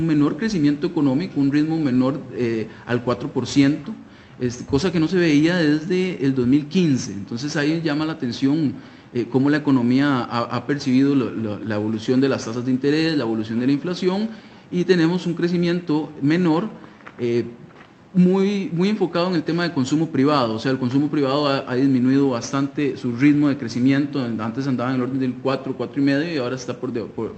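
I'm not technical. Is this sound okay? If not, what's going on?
Yes, nothing stood out as wrong when listening to this sound, which comes across the way audio normally does after passing through an ordinary internet call.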